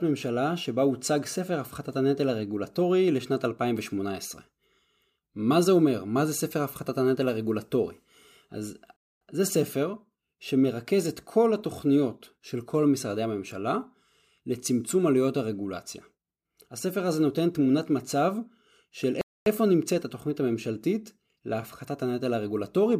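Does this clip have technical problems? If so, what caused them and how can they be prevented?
Yes. The speech stops dead twice, for a quarter of a second each time, from 8.96 to 9.21 s and again from 19.21 to 19.46 s. Both holes have abrupt edges and nothing around them is missing. This is a gap between chunks: the audio was handled in 10-second pieces, and 250 ms of silence was inserted at each join, as from codec padding or playback starting each piece late. To prevent it, trim padding and queue chunks back to back without delay.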